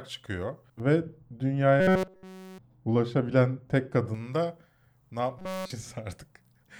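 From 0.80 s to 4.14 s, ending just before "da ne", the speech turns dull and muffled. This is de-emphasis applied wrongly: a treble cut meant to undo pre-emphasis was applied where none existed, or applied twice. The response slopes smoothly down to about 11 dB below the 1 kHz level at 10 kHz.

Inside that stretch, from 1.80 s to 2.58 s, and again from 5.39 s to 5.70 s, just after "da ne", the speech becomes a rigid metallic buzz at 188 Hz that only loosely follows the syllables. This is robotic sound from repeated short buffers. It is likely caused by a segment of about 5.3 ms being replayed continuously in place of essentially all the real audio, and that fixed repetition period sets the buzz rate.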